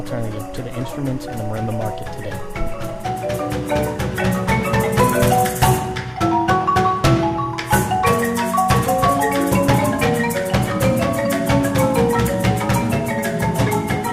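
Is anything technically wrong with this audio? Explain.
Yes. Timecode bleed runs through the whole clip. Linear timecode from a nearby track or cable is leaking in. Its square wave flips between tones near 1 and 2 kHz, 23.976 frames per second. It sounds like a steady chirping warble, roughly 30 dB below the sound.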